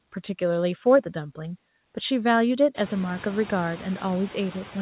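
Noise suppressor artifacts run throughout: the suppressor dips the steady background by about 16 dB between phrases, and it resurfaces under the speech.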